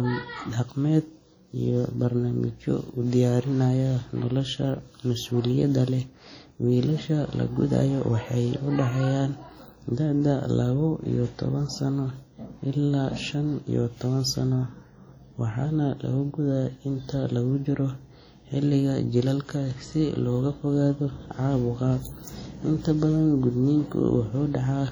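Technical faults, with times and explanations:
Throughout, WMA compression: the speech has heavy ringing and a washy smear, with hiss that swells and fades along with it and weaker detail missing. The likely cause is long transform blocks spreading quantisation noise over tens of milliseconds, consistent with 32 kbps WMA 1.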